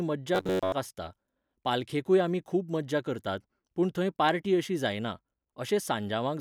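Robotic sound from repeated short buffers runs from 0.35 to 0.72 s, just before "आसता पालखेकूय आमी खूब". The speech collapses into a rigid metallic buzz near 94 Hz, likely from a roughly 11 ms stretch being replayed while most of the real audio went missing.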